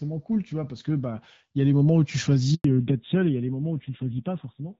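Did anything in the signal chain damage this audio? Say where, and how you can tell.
Yes. Network stage: a handover gap silences the speech from 2.54 to 2.64 s, a 100 ms dropout while the call switched links and no frames arrived.

Codec stage: a fallback to narrowband starts at 2.64 s. Everything above 4 kHz vanishes and the speech dulls, which fits AMR-WB giving way to 7.4 kbit/s AMR-NB.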